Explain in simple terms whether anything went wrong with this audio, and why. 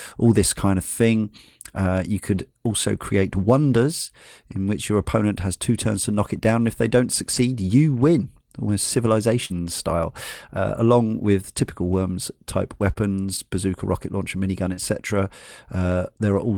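Three sharp, single clicks pop out at 6.51, 13.34 and 15.92 seconds. These are dropped samples: a tiny sliver of the recording, likely a handful of samples lasting a fraction of a millisecond, went missing, so the sound jumps abruptly and clicks.

Around 7.33 to 7.43, 9.50 to 9.52, 12.86 to 12.92 and 14.77 to 14.79 seconds, the speech turns briefly rough and noisy without any gap. This is a lost packet rebuilt from error correction. Chunks of the call failed to arrive, so the receiver played a lower-quality backup copy carried in the next chunk. The longest stretch, at 7.33, fits about three lost packets.

Brief smears or wobbles appear at 9.45 to 9.52, 12.94 to 12.97 and 14.73 to 14.79 seconds. This is short concealed packet loss. Roughly 20 to 40 milliseconds of audio arrived too late, and the receiver patched the hole by stretching out the preceding sound before blending back in.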